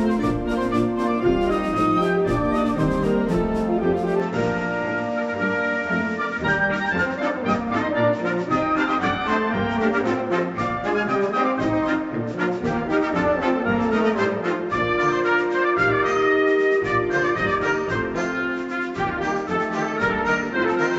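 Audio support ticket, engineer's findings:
From 4.20 s to end: sound turns duller and stays so, nothing above 7.6 kHz, new background noise about 45 dB down, no gap, level unchanged. Likely input switched to a poorer device; the changed noise floor rules out a plain low-pass.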